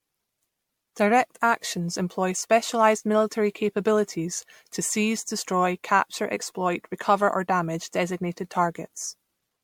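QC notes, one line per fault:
throughout, generation loss: swirly, hollow, smeared speech with blurred onsets, likely from about seven passes of MP3 encoding near 96 kbit/s, each requantising on a shifted frame grid. A spectrogram shows accumulating flickering holes, softened transient edges, and nothing above 19.9 kHz.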